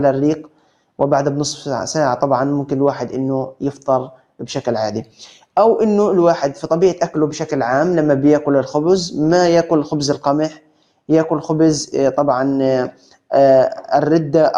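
A noise suppressor applied to music or sounds runs throughout, treating steady parts of the sound as noise and pulling them down by about 5 dB at a time. Level pumps and tails thin, seen as a wavering envelope and patchy, flickering harmonics on a spectrogram.

Sound is cut by the noise suppressor at 0.46–0.71 s, 3.73–3.88 s, 10.5–10.99 s and 12.91–13.31 s, with drops of about 12, 10, 12 and 11 dB. Each appears as a sudden dip in the waveform and a faded band across the spectrogram.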